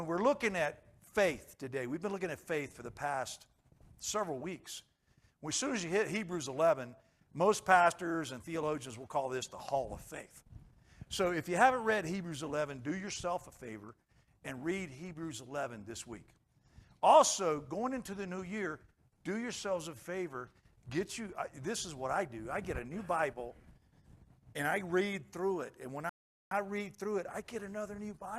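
From 26.09 to 26.51 s the sound drops to silence and then resumes exactly where it stopped: a rebuffering stall, with the player starved of data, adding 0.42 s.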